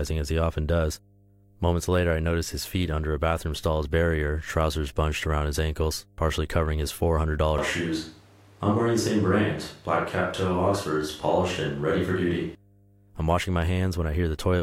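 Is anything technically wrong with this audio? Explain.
Yes, two faults are audible.

Mains hum runs through the whole clip: a steady, low drone at 50 Hz that sits under the speech, roughly 35 dB below it, so it is faint but constant and most exposed in pauses. It comes from power-line current leaking into the signal path, typically through a ground loop or a transformer near the cabling.

From 7.58 s to 12.55 s, just before "I'm washing", there is a switch to a distant microphone. The speech suddenly turns roomy and hollow, thinner in the bass, with more room noise behind it, though the loudness barely changes. At 12.55 s it snaps back to the close, full sound. This is likely the close microphone dropping out and a farther one, such as a camera microphone, filling in.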